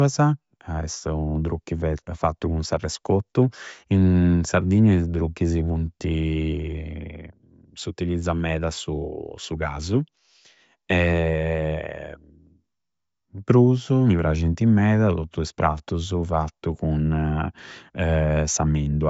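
No technical faults can be heard anywhere in this speech recording. There is nothing in the audio at any point that calls for a time mark or a fault description.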